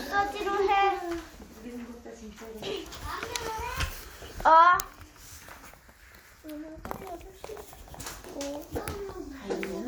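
Nothing stood out on listening to this recording of sounds.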